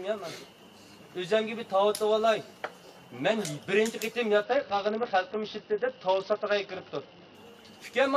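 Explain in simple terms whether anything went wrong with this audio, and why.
Something did go wrong, from about 4.43 s to 7.35 s. That stretch has a Bluetooth SBC bit pool drop. The wireless link got crowded, so the sending device cut back how much detail it sent, just to keep the sound going. The highest parts of the sound lost their share first. So the treble turns dull and muffled, and a rough, gritty hiss creeps in. The sharp top end comes back once the link recovers, at about 7.35 s.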